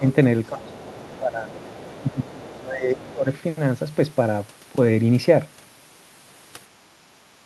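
The speech dips sharply at 0.00 to 0.05 s, then again from 0.49 to 1.57 s and 2.02 to 3.26 s, falling by around 20 dB. This is speech suppressed in double talk, likely an echo canceller turning down the talker while both sides spoke at once. Overlapping these dips, a faint second voice, about 25 dB below the speech, sits underneath from 0.45 to 1.19 s, 1.56 to 2.59 s and 2.98 to 3.12 s. This is the other side's voice leaking through: likely loudspeaker playback reaching the microphone that the canceller failed to remove.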